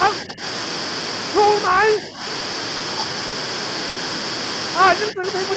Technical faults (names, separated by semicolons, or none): speech suppressed in double talk; short stall from a late packet